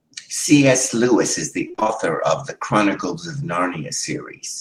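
From 1.67 to 1.90 s the speech turns choppy, with small pieces dropping out. This is repeated packet loss (robotic sound): audio kept arriving late or not at all, with what sounds like half a dozen separate holes, none longer than about 25 ms. Each hole was filled by stretching the last received sound, covering nearly half of the stretch, and the repeated patching produces the choppy sound.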